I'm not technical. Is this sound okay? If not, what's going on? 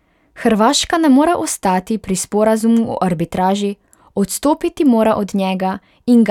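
Yes, this speech recording sounds fine, with nothing odd or broken to hear anywhere in it.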